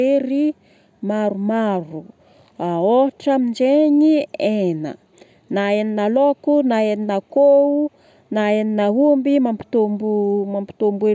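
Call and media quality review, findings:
Nothing stood out on listening to this speech clip; the call microphone processing shows only its expected limits, with nothing above 8 kHz and the lowest bass trimmed.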